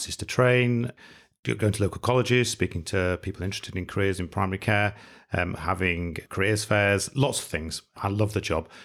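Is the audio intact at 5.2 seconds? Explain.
Yes, the speech at 5.2 seconds plays through intact, with no dropout, click, distortion or other fault at that moment.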